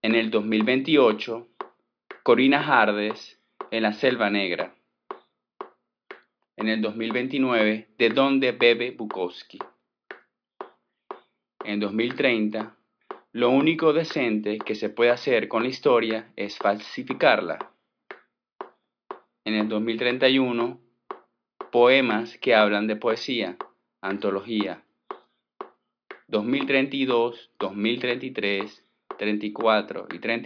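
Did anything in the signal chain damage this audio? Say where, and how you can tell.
No, nothing along the chain seems to have harmed this recording, so there's no damaged stage to point to.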